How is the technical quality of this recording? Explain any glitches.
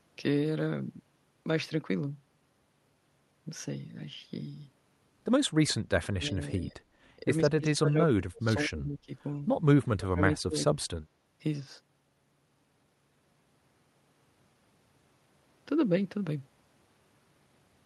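The speech has a run of dropouts between roughly 6 and 11 seconds, so the technical quality isn't clean.

Speech suppressed in double talk: from 6.15 to 6.83 s, 7.2 to 9.11 s and 9.95 to 10.58 s the voice sinks and breaks up in chunks, falling by roughly 25, 35 and 30 dB at the deepest points. The likely cause is an echo canceller that heard the far end talking at the same time, couldn't separate this talker from the loudspeaker echo, and pulled both down.

Background gated by the echo canceller: from 10.94 to 11.05 s, about a tenth of a second, the room tone ducks by about 15 dB and then comes back. That's the canceller clamping the mic while the loudspeaker was active and releasing it straight after, so you hear a brief hole in the background rather than a drop in the voice.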